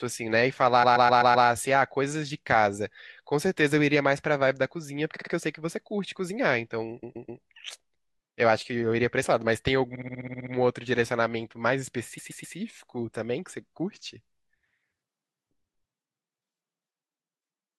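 Repeated frames cause a stutter at 0.82 to 1.46 s (a 128 ms block heard five more times), 5.16 to 5.32 s (a 44 ms block, three more times), 7.02 to 7.41 s (128 ms, three more), 9.94 to 10.52 s (64 ms, nine more) and 12.17 to 12.56 s (128 ms, three more). Stretches of compressed audio were played again, adding 0.16 to 0.64 s each. Spectrograms show identical tiled blocks.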